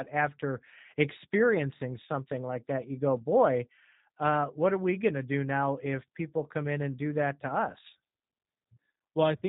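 From start to finish the speech carries the sound of the G.729 codec, in a form consistent with its 8 kbit/s G.729A variant. The codec discards the waveform and rebuilds each 10 ms frame from a vocal tract filter, a pitch predictor and a handful of pulses, so nothing above 4 kHz survives. The damage is plainly audible: the speech stays intelligible but sounds muffled, slightly rough and synthetic, with a buzzy, reconstructed quality.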